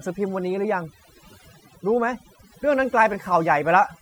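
Throughout the speech, the background drops to near silence dotted with twinkling specks, the mark of overdone noise removal clamping down on bands near its noise estimate.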